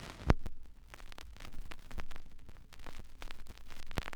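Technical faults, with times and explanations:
0.46, 0.97, 1.47, 1.98, 2.49, 3.00 and 3.50 s: gap between chunks. The sound is interrupted by a hard-edged hole of about 7 ms every half-second, where silence sits between successive 0.5 s blocks. Nothing is lost, but each join produces a brief, regular dropout.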